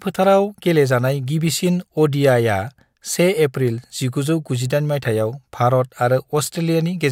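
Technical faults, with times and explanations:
No technical faults are audible.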